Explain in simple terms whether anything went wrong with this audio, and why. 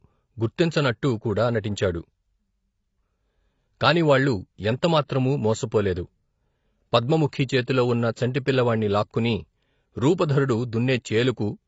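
Throughout the speech, the sound is dull, with nothing above 7.6 kHz, and carries a smeared, plainly audible watery roughness. That roughness, beyond plain muffling, points to AAC compression, likely squeezed too hard, so fine detail was thrown away and partly smudged.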